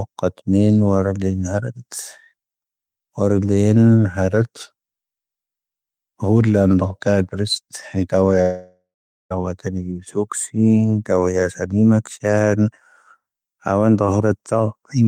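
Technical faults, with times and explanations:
8.41–9.32 s, long network dropout: the speech turns into a fading buzzy smear, then about 0.43 s of near silence, and resumes with roughly 0.9 s missing, likely from packets that never arrived. The spectrogram shows smeared harmonics decaying into an empty band, and the waveform shows a flat gap.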